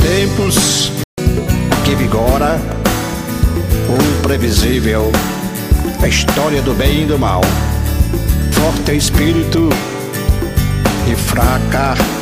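At 1.04 s the sound cuts to silence for about 144 ms, until 1.18 s, then resumes where it left off. That is a playback stall, likely the player running out of data or its thread being blocked. A dropout would lose material instead of pausing it.

From 1.18 s to 1.75 s comes catch-up at higher speed: the player runs its backlog at 1.25 times normal speed, raising the pitch by roughly four semitones before settling back. Unlike a sample-rate mismatch, the shift is brief and follows the gap.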